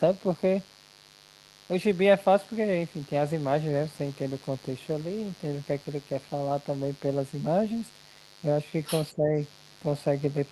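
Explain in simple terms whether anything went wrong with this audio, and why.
Mains buzz runs through the whole recording: a steady, raspy hum tied to the 50 Hz power supply. Sharp electrical spikes, from something like a dimmer or a poorly shielded cable, sneak in twice per mains cycle and stack up into this gritty buzz beneath the speech.

The other side's voice leaking through appears from 8.86 to 9.05 s as a faint second voice. The likely cause is that the talker's loudspeaker played the far end, and the echo canceller failed to scrub all of it from the microphone.

Speech suppressed in double talk follows from 9.13 to 9.33 s, where the talker's voice briefly dips. Both sides were likely speaking at once, so the echo canceller could not tell them apart and turned everything down together.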